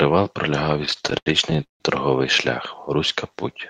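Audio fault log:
0.85–1.82 s, repeated stalls (stutter): the buffer ran dry twelve times, so the last sound got stretched to fill gaps up to 162 ms. Nothing's lost, but it drags and hiccups.
3.31–3.55 s, jitter buffer slow-down: the receiver repeated pitch periods to rebuild its reserve, adding 44 ms. It plays at 86% speed with unchanged pitch, so it sounds drawn out.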